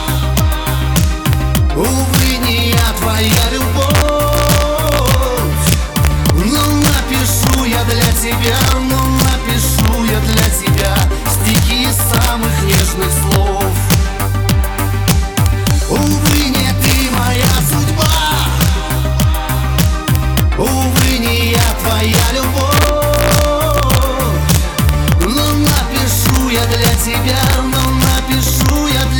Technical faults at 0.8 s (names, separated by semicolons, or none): integer overflow